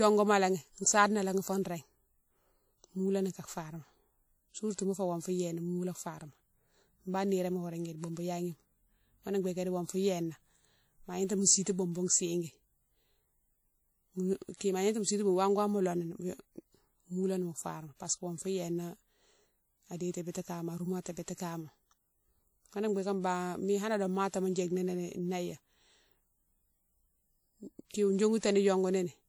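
Throughout the speech, a transform codec is likely coding the audio at a low bitrate, and the texture points to WMA at about 48 kbps. Its long blocks let quantisation noise smear across tens of milliseconds, and weaker spectral detail is discarded. The WMA compression damage is plainly audible as a ringing, washy quality with a hiss that swells and falls with the speech. The band is intact up to about 20.1 kHz, so the loss is in detail, not bandwidth.

At 14.57 to 14.61 s, a sharp onset lands late in a coding block. The noise budget set for that loud attack is spread back over the quiet moment before it, producing pre-echo. A short hiss runs for about 41 ms ahead of the attack, which sounds softened and smeared.

At 28.38 to 28.43 s the same pre-echo recurs with a longer spread of about 52 ms. The hiss before the attack runs longer, and the onset is smeared.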